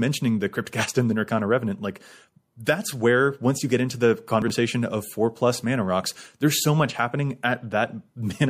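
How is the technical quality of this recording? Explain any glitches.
Two distinct glitches stand out in the speech, one a codec artefact and one an ordering fault.

Pre-echo appears from 2.64 to 2.67 s: a hiss about 19 dB above the quiet background, lasting roughly 21 ms, just before a sharp attack. The codec's transform block, which fits a 36 ms window without switching to short blocks, spread quantisation noise ahead of the onset. On a spectrogram it shows as a broadband smear before the transient.

Chunks out of order occur from 4.42 to 4.50 s. A 20 ms chunk plays late, about three chunks after its proper place, so that moment sounds jumbled. The waveform shows abrupt discontinuities at the three joins.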